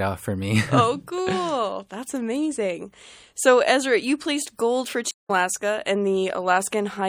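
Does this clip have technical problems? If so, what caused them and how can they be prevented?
Yes. Throughout the clip there is clearly audible MP3 compression damage. The upper detail sounds watery and swirly because weak frequency components drop in and out from frame to frame. Sharp attacks smear. On a spectrogram this shows as speckled, flickering patches in the upper frequencies. The damage points to a low-bitrate MP3 encode, likely around 64 kbps. To prevent it, encode at a higher bitrate or use a more efficient codec.

At 5.11 s a stream reconnect occurs. The connection dropped, the player fell silent for about 0.18 s, and it restarted decoding mid-stream at 5.31 s. Because the stream kept running during the gap, playback resumes roughly a fifth of a second further on, so a short stretch of sound is skipped rather than merely paused. On a waveform this appears as a flat, near-silent gap followed by an abrupt or briefly faded restart. 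To prevent it, use a larger client buffer and a more stable network path so short dropouts don't force a reconnect.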